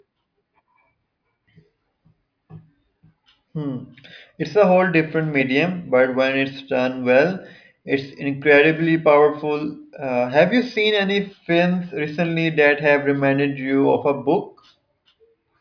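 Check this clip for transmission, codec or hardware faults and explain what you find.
Nothing stood out on listening to this speech recording.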